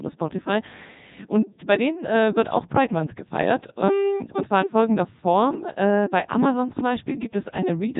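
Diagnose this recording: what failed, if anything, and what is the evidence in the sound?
Codec 2 vocoder damage runs through the whole speech clip at the codec stage: heavy robotic, buzzy speech with nothing above about 3.8 kHz, from its 3.2 kbit/s mode. The decoder rebuilds the voice from sine waves using only pitch, voicing, energy and spectral envelope, discarding the original waveform.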